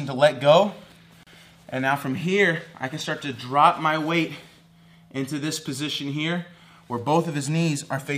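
Separately encoded pieces were joined without trimming the encoder's start delay and last-frame padding, leaving a gap at a join of encoded pieces from 1.23 to 1.27 s. A gap of about 34 ms cuts into continuous sound, with smeared edges, before resuming where it stopped.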